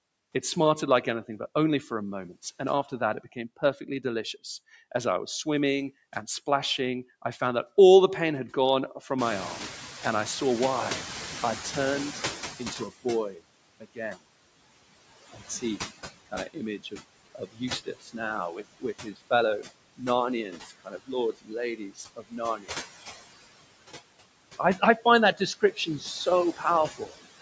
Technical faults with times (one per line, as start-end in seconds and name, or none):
0.00-27.41 noise suppressor artifacts
2.89-4.36 speech cut by the noise suppressor
9.18-12.91 noise suppressor catching up
12.59-14.23 speech cut by the noise suppressor
16.26-22.77 speech cut by the noise suppressor
24.58-27.41 speech cut by the noise suppressor